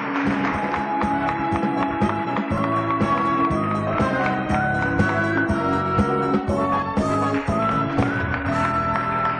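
At 2.58 s a repeated buffer replays one 1.45 ms slice, consistent with a 64-sample buffer, four times. It gives a click, visible as identical, hard-joined waveform cycles.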